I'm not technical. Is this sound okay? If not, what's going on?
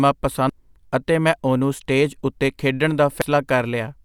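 No. At 0.50 s, just before "ਅਤੇ ਮੈਂ ਉਹਨੂੰ ਸਟੇਜ", and again at 3.22 s, there's a tiny blip from damaged data in a compressed stream. Part of the file is wrong, so the player briefly misreads it.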